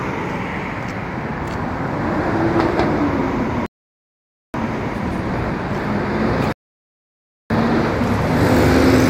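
Twice the player exhausted its downloaded audio and waited for more, a rebuffering stall: silence from 3.66 to 4.54 s and 6.53 to 7.50 s, each resuming exactly where it stopped.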